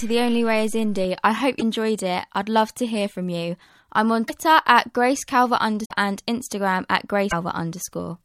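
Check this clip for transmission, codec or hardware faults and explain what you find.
Four short glitches interrupt the speech, all of one kind, most likely a broken MP3 bit reservoir. They fall at 1.58–1.62 s (between "I hope" and "it I'd love to"), at 4.27–4.30 s (after "from you I'm on"), at 5.84–5.92 s and at 7.30–7.33 s. Each lasts roughly one to three frames, which fits 26 ms MP3 frames. When frames go missing, the next frame reaches back into the reservoir and decodes bytes belonging to another frame. The speech jumps ahead with a brief chirp or noise burst. On a spectrogram each appears as a narrow vertical smear breaking the harmonic bands. On the waveform it shows as a short discontinuity.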